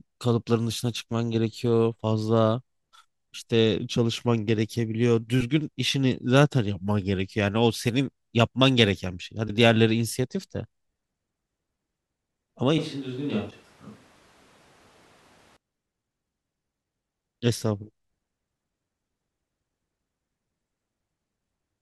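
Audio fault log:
5.40–5.43 s, 9.47–9.50 s and 13.49–13.52 s: broken MP3 bit reservoir. Each event is a brief burst of about 30 ms where the sound skips forward and is replaced by a chirp or noise smear. This is likely a stream with frames cut out. The following frame reaches back into the reservoir for its borrowed bits, finds data from the wrong frame, and decodes garbage for roughly one frame length. The 26.1 ms frame length fits 1152-sample MP3 frames at 44.1 kHz.
12.78–15.57 s: switch to a distant microphone. The speech abruptly becomes roomy and hollow, loses low end, drops by about 5 dB, and sits over room noise roughly 25 dB below it. At 15.57 s it snaps back to the close sound. The audio likely came from a second, more distant pickup while the close microphone's feed was missing. The bit-reservoir event at 13.49 s falls inside this stretch.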